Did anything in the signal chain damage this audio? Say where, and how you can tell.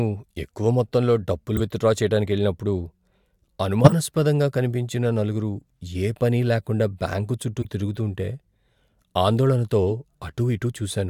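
Yes. The damage is in the codec stage. At 1.56 to 1.61 s, between "ఎక్కువ మొత్తంలో డబ్బులు" and "విత్డ్రా చేయడానికెళ్లినప్పుడు", compressed frames were skipped. The speech jumps forward by around 40 ms, which points to whole frames lost or rejected by the decoder.

There are also three bursts where a corrupt frame was decoded. At 3.84 to 3.93 s, a few frames play out as a very loud burst peaking around -5 dBFS. At 7.62 to 7.65 s, after "పనీ లేకుండా బ్యాంకు చుట్టూ", a shorter burst of about two frames is fairly loud. At 9.90 s a brief blip is much quieter. Flipped bits gave the decoder wrong gains and codes, so energy landed at the wrong frequencies.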